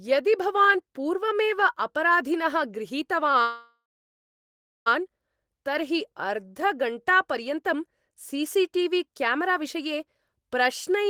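At 3.31 to 3.35 s there is a short stall from a late packet. A packet missed its playout time, the jitter buffer ran dry, and the receiver held the last sound for about 18 ms until the data turned up, then resumed from the same point with nothing lost. It is heard as a brief smear or faint buzz in the speech. On a spectrogram the harmonics run flat and unchanged for that instant. In the waveform a single cycle shape repeats with a small dip in level.

From 3.42 to 4.88 s comes a call audio freeze. The speech stops moving forward, a decaying buzz carries the last sound briefly, and then roughly a second of silence follows before the talker picks up exactly where they stopped, about 1.44 s later than they should. The likely cause is packets held up in transit, emptying the jitter buffer. A spectrogram shows smeared, fading bands giving way to a blank region. The waveform collapses to a flat line.

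Between 5.93 and 6.65 s a jitter buffer slow-down stretches the speech. To rebuild its reserve the receiver repeated single pitch periods and slivers of pauses, adding about 47 ms and playing that stretch at about 94% speed while keeping the pitch unchanged. It sounds slightly drawn out. On a spectrogram the harmonics hold their spacing but features lengthen. In the waveform, near-identical periods appear duplicated back to back.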